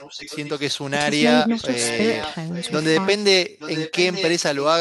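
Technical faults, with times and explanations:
0–0.62 s, 1.48–1.63 s, 1.8–2.35 s, 2.51–3.06 s and 3.59–4.3 s, echo leak: a delayed copy of the speech trails the talker by 0.87 s. It sits roughly 20 dB down early on and rises to about 10 dB below the speech in the last stretch. It was likely a far-end loudspeaker echo that the canceller failed to remove. A spectrogram shows weak duplicates of the speech harmonics shifted 0.87 s later, and the waveform shows low-level bursts in the gaps.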